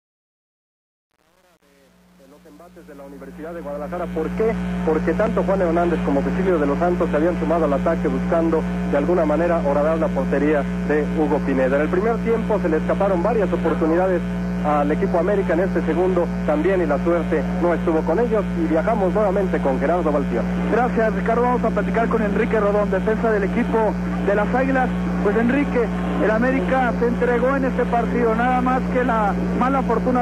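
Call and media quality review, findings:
Truncation distortion on a fade, 0.0 to 4.50 s, worst 0.0 to 3.83 s. Gritty, stepped low-level audio. Probable component: gain or fade stage truncating without dither, consistent with about 8-bit resolution at low level. The grit comes from requantisation of the quiet portion of the fade.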